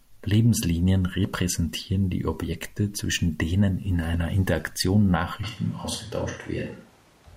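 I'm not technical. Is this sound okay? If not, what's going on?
No, not quite. From about 5.43 seconds to the end, the speech suddenly turns roomy and hollow, with less of its low, full body, and a faint layer of room noise sits behind it. The loudness stays about the same. That's the classic sound of a switch to a distant microphone: the close mic likely dropped out or wasn't used, so the last stretch comes from a mic much further away, such as a camera's.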